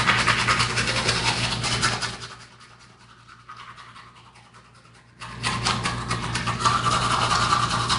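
From start to end, the sound is rough and hissy, smeared, with nothing above 10.6 kHz. This is likely Nellymoser compression, pointing to about 44 kbps.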